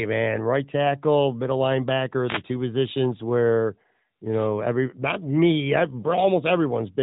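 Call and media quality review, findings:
Wireless microphone noise hit, 2.26 to 2.43 s, just before "two positions where". Short swish of static over the speech, rising then clearing. Probable component: analogue FM radio mic link; reflections cancelling the carrier, receiver noise surging during the fade. Distinct from packet loss: added hiss rather than a dropout, smeared frame or repeated fragment. Speech band-limited, nothing above about 3.8 kHz, consistent with narrowband mobile AMR at a high mode.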